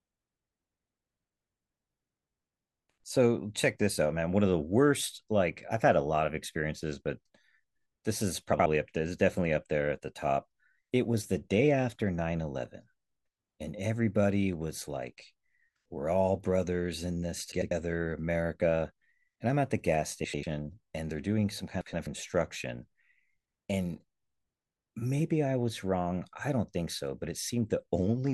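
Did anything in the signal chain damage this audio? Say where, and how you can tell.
Yes: frames out of order, from the network or jitter-buffer stage, at 8.53–8.66, 17.53–17.72, 20.24–20.44 and 21.81–22.07 s. Each stretch plays its two halves swapped (blocks of 64, 96, 96 and 128 ms, fitting 32 ms frames), giving a garbled flutter. Spectrograms show three vertical edge discontinuities per event, with no time lost.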